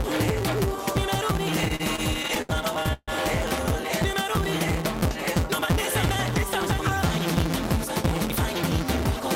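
From start to finish there is a block size mismatch with truncation. One stage writes longer blocks than the next one reads, so the tail of every block is dropped. The regular cuts produce a steady buzz at 172 Hz, which fits a 256-sample read block. Because material is discarded, the sound runs 1.88 times faster yet stays at about its normal pitch. A plain speed-up or wrong sample rate would raise the pitch along with the tempo.

Between 1.65 and 3.10 s, repeated stalls (stutter) break the flow. Packets kept arriving late, and the jitter buffer ran dry eleven times. At each stall the receiver extended the last sound, fading it during the longer waits. The longest gap is 148 ms, and 362 ms in total is filled in, about a quarter of that span. Nothing is lost, which sets this apart from dropouts: the audio drags and hiccups but then resumes where it left off, with no skipped material.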